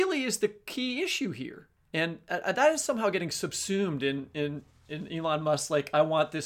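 Nothing technically wrong turns up anywhere in this short piece of recorded speech, so there's no fault to point to and no time to flag.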